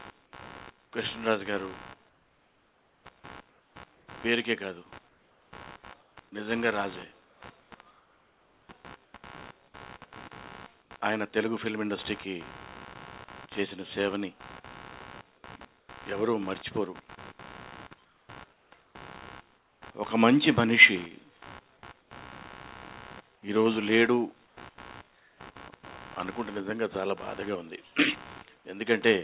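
A buzzing, chirping texture pulses at roughly 70 times per second throughout, about 20 dB below the main sound. This is computer activity noise: processor or peripheral load shifting the shared audio ground.

The real background drops out and is replaced by steady, featureless hiss at 2.09–4.07, 5.09–6.17, 7.25–9.14, 10.82–10.91, 15.8–15.89, 18.05–19.82, 22.01–22.1 and 24.47–25.4 s. The brief patches at 10.82, 15.8 and 22.01 s sit about 3 to 4 dB quieter. This is comfort noise in place of the background, likely from discontinuous transmission, where the receiver synthesises noise during pauses. Throughout, the call path carries nothing above 4 kHz.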